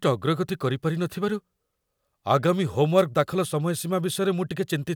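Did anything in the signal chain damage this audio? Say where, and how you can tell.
Yes. A wireless microphone noise hit occurs at 2.97 to 3.02 s, a burst of static lasting about 50 ms. The damage happens in the analogue radio link, before conversion. The FM carrier from the microphone faded as reflected paths cancelled at the receiver. With the carrier that weak, receiver noise rose and broke through as a brief swish.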